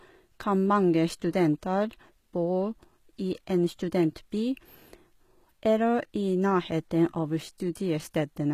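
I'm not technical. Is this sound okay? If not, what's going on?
No. The recording was squeezed hard to save space, and the way the damage sounds points to a likely cause, HE-AAC compression, running the whole way through. That kind of compression keeps the lower part of the sound and rebuilds the high, crisp part from copies of the lower part. Here, s sounds and other hissy parts of the speech come out gritty, metallic or lisping, rather than clean and natural.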